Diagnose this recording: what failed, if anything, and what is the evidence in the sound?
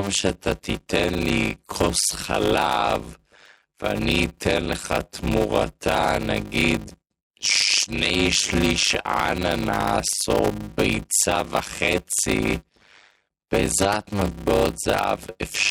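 Block size mismatch (padded) at the driver/buffer stage: zero-filled gaps cause a 100 Hz buzz throughout, and speech runs at 0.533 speed, timbre unchanged.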